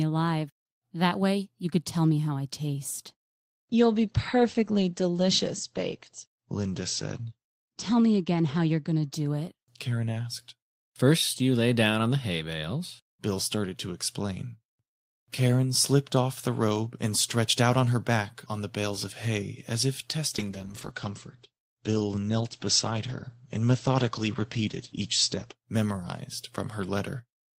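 A call bitrate drop hits this speech clip from 3.08 to 10.45 s, and again from 20.38 to 25.61 s, right after "of hay as if". Both times the audio bandwidth collapses from 20 kHz to 8 kHz, so everything turns muffled and coarsely coded, which fits the encoder being pushed from 32 kbps to around 12 and then 10 kbps after the bandwidth estimate fell. The worst stretch lasts about 4.8 s the first time and about 5.1 s the second.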